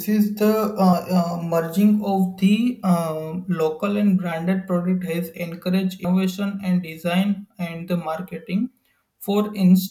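At 0.92, 6.04 and 8.66 s, compressed frames were skipped: the speech jumps ahead by roughly a tenth of a second, about 0.15 s at 6.04 s.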